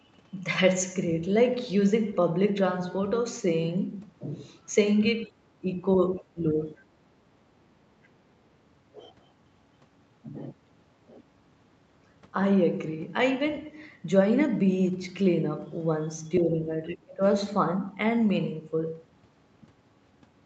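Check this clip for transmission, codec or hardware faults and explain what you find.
Two echo-canceller faults appear in this speech, while the call path's cut-off near 8 kHz is simply its normal bandwidth.

Speech suppressed in double talk, at 5.27–5.35, 5.59–5.67, 6.19–6.59, 6.76–6.84, 16.4–16.7 and 16.88–17.23 s: the echo canceller likely mistook overlapping talk for echo and attenuated it. The speech dips by roughly 5 to 15 dB, and by about 30 dB in the final, deepest gap.

The other side's voice leaking through, at 6.16–6.22 s: residual loudspeaker echo was likely left uncancelled. A faint scrap of a second voice, far below the main talker, slips through.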